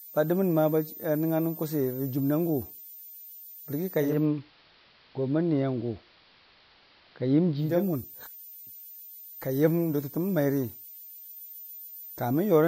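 A switching power supply is running in an audible burst mode or beating with another supply for the whole clip, producing a switching supply whistle: a thin high tone wandering between 13.7 and 13.9 kHz, roughly 20 dB below the speech.

From 3.97 to 7.86 s, a hybrid receiver loses its digital signal and blends to the AM analogue broadcast, cross-fading over about 305 ms each way. During that stretch the speech shifts level by about 2 dB and carries hiss roughly 30 dB down.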